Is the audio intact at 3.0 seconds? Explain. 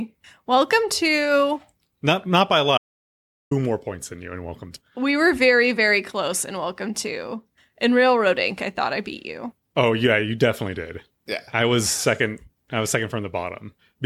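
No. At 3.0 seconds the speech sits inside an audio dropout to silence lasting from 2.78 to 3.51 s. For about 0.74 s the sound cuts to silence, with no room tone. The input was likely lost while the recorder kept writing silence, so that stretch is gone.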